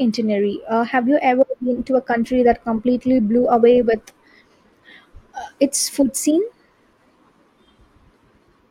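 From start to finish, the speech carries a steady buzz at about 43.1 Hz. That is a block size mismatch (truncated). One stage hands on longer blocks than the next stage takes in. The leftover tail of each block is dropped. The buzz rate fits blocks of about 1024 samples. Each cut leaves a jump in the waveform, repeating at that rate. The speech runs at 1.0 times normal speed, so pacing sounds unchanged.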